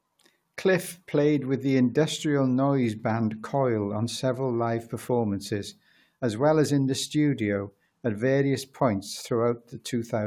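Nothing stood out as a technical problem on listening to this speech recording.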